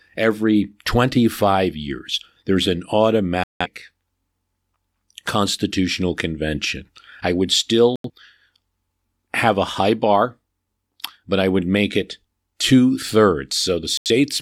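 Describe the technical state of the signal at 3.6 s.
At 3.6 s the signal is inside a digital broadcast dropout running from 3.44 to 3.67 s. The receiver stopped getting decodable frames, either because reception failed or because frames failed their checksum, so it muted the output until clean frames arrived again. The speech cuts to silence for roughly a quarter of a second and then resumes further along. About 170 ms of programme is simply missing, which fits a handful of lost frames.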